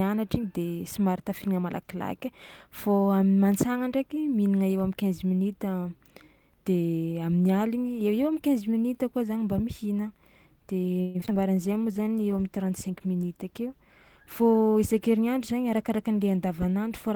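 From 11.01 to 11.37 s the speech breaks up with repeated packet loss, giving a robotic sound. Six gaps fall within about a third of a second, the longest 132 ms, and concealment patches roughly 43% of the span by stretching the last sound forward. Another 100 ms is simply missing. Unlike a single dropout, the holes come back to back, so the choppy texture persists instead of producing one clean break.

At 11.60 s a call bitrate drop sets in, with the encoder falling from 32 to 18 kbps and staying there to the end of the clip. Coarser coding makes the speech rough, and the top end is trimmed, so it sounds duller. This differs from packet loss because nothing goes missing and there is no chopping. The degradation is continuous and steady rather than arriving in bursts.

Overlapping the start of that drop, a jitter buffer slow-down runs from 11.67 to 12.23 s. The receiver repeats single pitch periods to rebuild its reserve, adding 76 ms and playing the audio at 88% speed. 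Syllables drag, but the pitch does not sink. That unchanged pitch is what separates it from a tape-style slowdown, where everything would also drop lower.

From 14.40 to 15.91 s the opposite happens in a jitter buffer speed-up. Short slices of one or a few pitch periods are cut out, removing about 150 ms in total, so the speech runs at 108% and sounds hurried. The pitch again stays put, which sets it apart from a simple playback-rate increase. Unlike packet loss, the trims are tiny and seamless, with no holes or robotic patching.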